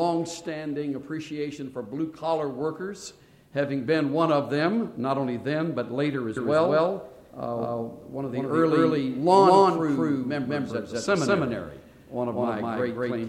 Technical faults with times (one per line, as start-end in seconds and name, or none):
6.37-13.28 doubled audio track